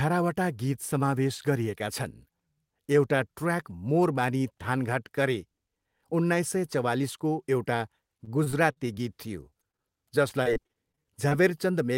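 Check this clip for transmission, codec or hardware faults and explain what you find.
Yes, there's a transmission fault: repeated packet loss with a robotic sound, in three bursts. The first runs from 8.17 to 8.98 s, right after "उन्नाइस सय चवालिसको एउटा", then 9.50 to 9.81 s, then 10.29 to 11.33 s. Packets keep going missing, and each short hole, up to about 40 ms, gets patched by stretching the previous sound. With roughly a fifth of each stretch filled that way, the speech turns choppy, with pieces missing.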